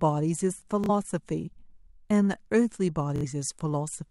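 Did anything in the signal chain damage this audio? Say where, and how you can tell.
Yes. Bluetooth stutter at the wireless link: lost packets made the receiver replay its last buffer, so the speech buzzes around 0.84–0.90 s and 3.16–3.25 s, then skips ahead.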